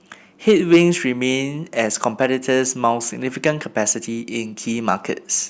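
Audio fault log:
0.48 to 0.82 s, hard clipping: peaks pushed about 5 dB past the limit get sliced flat, so loud bits turn into a gritty, buzzy fuzz.
3.46 to 3.49 s, hard clipping: a brief overload of about 3 dB flattens the peaks, leaving a quick crackle from those squared-off tops.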